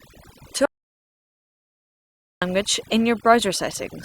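Overdone noise removal runs throughout the speech: aggressive band gating leaves near-silent background with twinkling specks, seen as scattered isolated blobs on a spectrogram. From 0.66 to 2.42 s, an audio dropout to silence erases about 1.76 s of sound, likely from lost input, showing as a near-flat waveform and a blank spectrogram.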